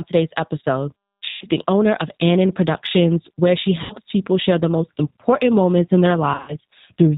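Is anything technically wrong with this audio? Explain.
Yes, there are two problems.

The whole clip passes through the G.729 codec (G.729A at 8 kbit/s), and the damage is plainly audible. The codec rebuilds speech from a vocal tract model, a pitch predictor and a few pulses per 10 ms frame, so nothing above 4 kHz survives and the voice turns slightly rough and synthetic. Ordinary band-limiting would only dull the sound. The model-based coarseness is what marks this as a codec.

There is also VoIP packet loss concealed by the speech codec, in three places. The first runs from 1.29 to 1.45 s, after "today's episode" and before "the owner of", and covers about 120 ms of missing audio. The second runs from 3.83 to 3.95 s, after "where she" and before "people share the most", with about 70 ms missing. The third runs from 6.34 to 6.56 s, after "important moments in their". There about 120 ms is lost in pieces spread over 140 ms, and the longest single gap is 70 ms. 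In each case the decoder keeps extrapolating its last pitch and filter while lowering the gain. The gap therefore fills with a stretched, buzzy tone or coloured noise that fades, and the voice stays weak for a moment after the audio resumes. A simple dropout would leave silence or a click instead of this decaying sound.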